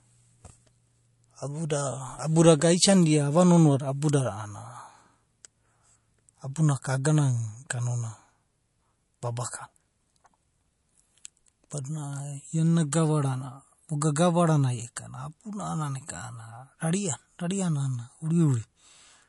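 Throughout, the speech sounds watery and swirly, with nothing above 11.3 kHz. This is likely MP3 compression at a starved bitrate near 48 kbps.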